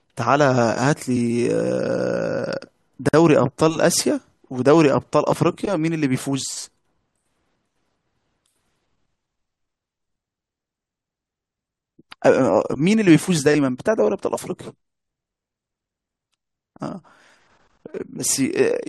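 The speech was encoded as separate pieces and then joined without trimming, so the encoder's start-up delay and the padding on the final frame of the earlier piece both remain at the seam. This leaves a gap at a join of encoded pieces from 3.09 to 3.14 s, a gap of about 48 ms that cuts into otherwise continuous speech. Its edges are smeared by the codec, so the silent part is shorter than that, and the speech resumes exactly where it broke off.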